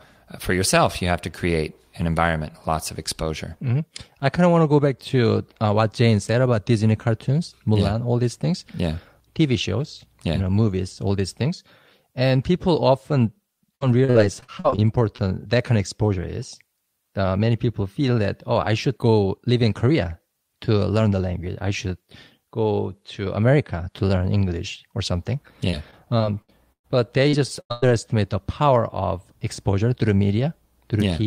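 From 13.75 to 15.20 s the speech breaks up into repeated packet loss, giving that robotic sound: ten little holes, the longest about 53 ms, with roughly a fifth of the stretch patched by stretching whatever sound came just before. It comes out choppy, with pieces missing. The same thing returns from 25.70 to 26.91 s with six holes, one of them a fairly long 114 ms.

Just after that, at 27.3 s, there's a short concealed packet loss. About 40 ms never arrived, and the decoder bridged it by carrying the preceding sound forward for 36 ms before easing back into the real signal. You'd hear it as a quick smear or wobble, and a small consonant-length piece of speech can simply be missing there.

Then come two bursts of packet loss back to back, from 27.61 to 27.72 s and straight on to 27.84 s, each about 100 ms of missing audio. In each one the receiver held the last sound and let it fade, so you get a sustained buzz or hiss dying away. 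The speech picks up again past the gap, with roughly 200 ms of it gone.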